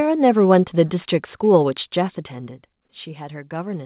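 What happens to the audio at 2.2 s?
From 2.12 to 2.16 s, a very faint copy of the speech returns 248 ms late, likely an echo leak: a loudspeaker's output escaped the echo canceller and was sent back. Unlike room reverb, it is a distinct delayed repeat, not a decaying tail.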